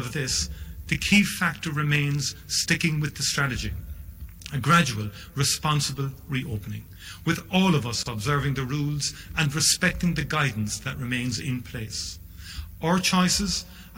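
At 8.03 s the sound drops out for about 28 ms and then resumes exactly where it left off: a gap at a join of encoded pieces. The audio was encoded in separate segments, which fits pieces about 10 s long, and joined without trimming. The leading encoder delay and final-frame padding of each segment stayed in, leaving a short hole whose edges the codec smears into a brief break.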